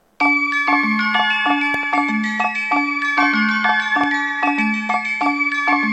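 At 1.74 to 1.85 s a loud pop arrives as a quick double pop, and a single one follows at 4.04 to 4.06 s, each peaking a few dB above the surrounding sound. The likely cause is a sudden voltage step, such as a plug, switch or static discharge, that the downstream circuitry rounds into a thump. Unlike a dropout or a digital click, the sound carries on unbroken underneath.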